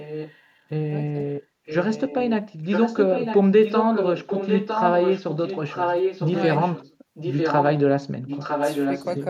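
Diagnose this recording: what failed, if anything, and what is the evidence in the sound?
A delayed copy of the speech trails it by 954 ms, in scraps at 0–0.34, 1.66–2.34, 2.64–3.41, 7.14–7.65 and 8.26–9.15 s and throughout 3.63–6.95 s. It sits mostly about 5 dB down, quieter early. This is echo leak in call processing, likely a loudspeaker-side echo canceller passing back what its microphone caught.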